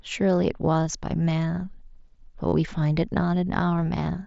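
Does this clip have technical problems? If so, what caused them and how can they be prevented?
Yes. Concealed Bluetooth headset packet loss: a nearly hidden dropout at 0.74 s, then a buzzy, held tone from 2.48 to 2.53 s, where the receiver repeated recent waveform over a 45 ms gap in the mSBC link. Keep the headset close to the phone, with a clear line of sight, and away from 2.4 GHz interference.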